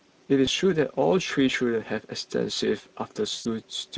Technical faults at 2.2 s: Speex codec

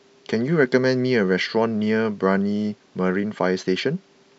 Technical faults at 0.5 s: none

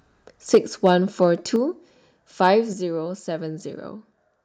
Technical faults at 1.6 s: microphone volume stepped down

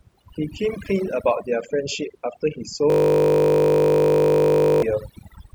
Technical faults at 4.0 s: overdone noise removal; system hang loop

